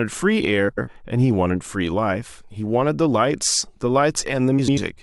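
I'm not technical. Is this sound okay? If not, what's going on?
No. At 0.68 to 0.88 s and again at 4.59 to 4.78 s the speech briefly garbles into a flutter. These are frames out of order: two short chunks, about 93 ms each, play swapped.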